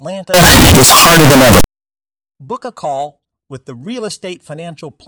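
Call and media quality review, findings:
Signed and unsigned mixed up, 0.34–1.64 s. Speech becomes very loud, harsh distortion; quiet stretches as loud as peaks. Likely 16-bit sample format mismatch in decode/playback path: top bit flipped, so each zero crossing jumps across the full range.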